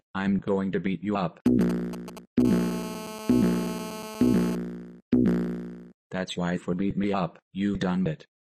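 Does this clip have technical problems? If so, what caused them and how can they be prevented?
Yes. GSM signalling bursts, 1.46 to 2.42 s: a nearby 2G phone's short radio bursts were rectified by the audio circuit, producing galloping ticks and brief 217 Hz buzzes, roughly 10 dB below the sound. Keeping phones well away from microphones, cables and inputs prevents this.

GSM phone buzz, 2.45 to 4.55 s: a nearby 2G phone, in a call, transmitted steadily at 217 bursts per second, and rectification turned this into a hard, raspy 217 Hz buzz about 12 dB below the sound. Shielded, properly grounded cabling with RF filtering at the inputs prevents it.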